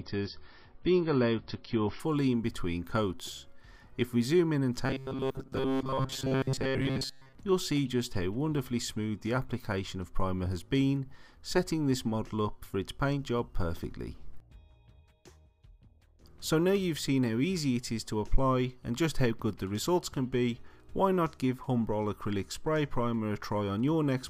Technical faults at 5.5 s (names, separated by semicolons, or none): robotic sound from repeated short buffers